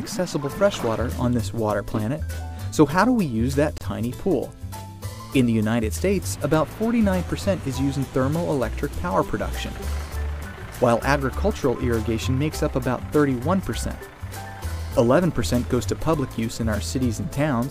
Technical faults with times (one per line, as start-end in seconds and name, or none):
3.78-3.81 gap at a join of encoded pieces